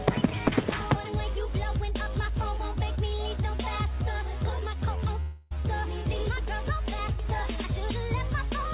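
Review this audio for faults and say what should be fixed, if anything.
Long network dropout from 5.2 to 5.53 s, likely from lost packets. The missing 0.3 s gets papered over with a fading buzz of the preceding sound, then the audio picks back up. Adding forward error correction or redundancy on the link, or a more robust network path, would keep a gap this size from reaching the listener.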